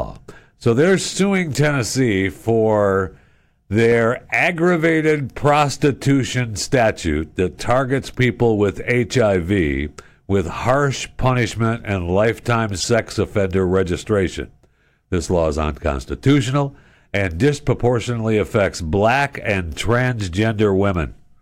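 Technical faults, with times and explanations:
Throughout, hard clipping: the speech is driven about 4 dB past what one stage can pass, so the loudest peaks are sliced flat, though only a small fraction of samples, about 0.4 percent, go over. The flattened tops add high harmonics, heard as brief crackle on the strongest syllables rather than a constant fuzz. Unlike a codec glitch, it follows the level of the speech itself and recurs wherever peaks are loud.
3.92 and 12.80–12.84, corrupt frame decoded: two isolated, fairly loud blips, very short at 3.92 and lasting about 38 ms at 12.80. Each points to a single compressed frame whose damaged bits the decoder played anyway, so misread gains and codes put energy at the wrong frequencies for roughly one frame's length. Unlike clipping, these blips don't follow the speech peaks. They are brief chirp-like bursts foreign to the surrounding sound.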